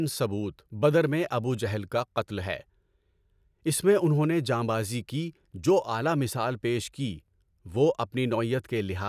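No technical faults turn up anywhere in the speech recording. Nothing in the sound calls for comment from a fault-finding point of view.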